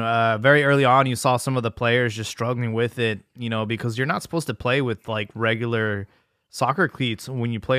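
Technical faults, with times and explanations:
No technical faults are audible anywhere in this recording.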